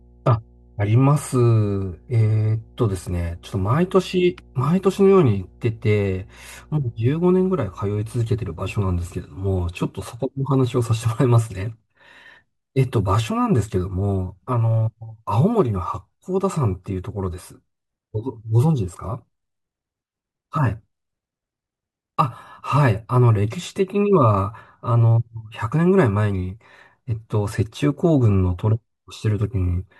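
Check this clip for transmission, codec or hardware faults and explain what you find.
One fault is present: mains hum over the first part of the speech. From 0.0 to 9.17 s, power-line energy leaks into the signal path, most plausibly through a ground loop or a transformer close to the equipment, and rides along with the recording at the 60 Hz supply frequency. The result is a steady low drone under the speech, sitting well below it in level, with some low harmonics above the fundamental, until it stops at 9.17 s.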